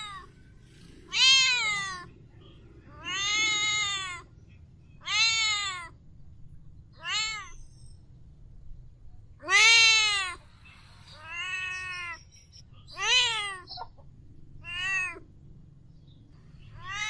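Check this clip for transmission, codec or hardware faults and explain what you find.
No fault can be heard anywhere in the signal, which stays intact and continuous throughout.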